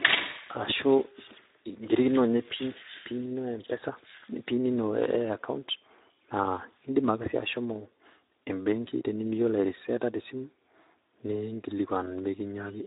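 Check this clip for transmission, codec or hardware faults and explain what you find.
One codec fault runs through the entire recording. Speex codec, throughout: the CELP coder is starved of excitation bits, consistent with about 11 kbps, leaving speech noisy and hoarse, with nothing above 3.8 kHz.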